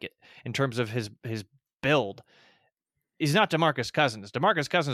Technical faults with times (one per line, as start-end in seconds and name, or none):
none